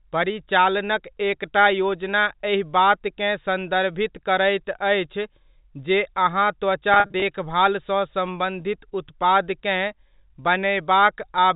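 Between 6.94 and 7.22 s there's a burst of packet loss with pitch repetition: about 140 ms of audio goes missing, scattered across roughly 280 ms, with no single gap longer than 40 ms. Each time a chunk drops out, the receiver loops the last pitch period to paper over the hole, so you hear brief held, slightly buzzy stretches rather than clean cuts. The pattern fits seven lost 20 ms packets. All of this sits inside the usual 4 kHz ceiling of the G.711 telephone line.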